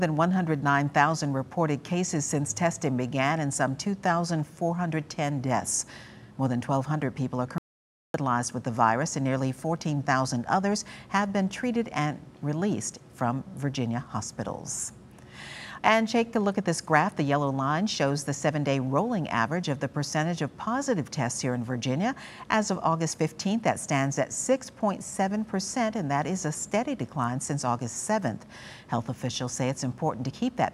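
At 7.58 s the sound cuts out abruptly and stays in dead silence until 8.14 s, roughly 0.56 s with no room tone at all. That's an audio dropout to silence, likely the input going missing briefly while the recorder kept writing silence, so whatever happened there is simply gone.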